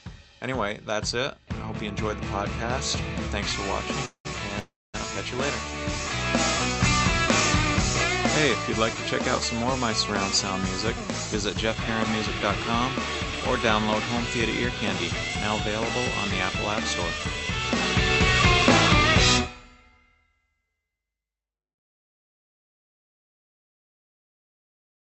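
Two call audio freezes at 4.05 to 4.27 s and 4.59 to 4.96 s: the last sound fades to silence, then resumes intact, likely from jitter-buffer underrun.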